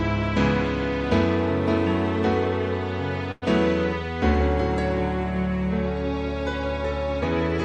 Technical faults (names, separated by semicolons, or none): call audio freeze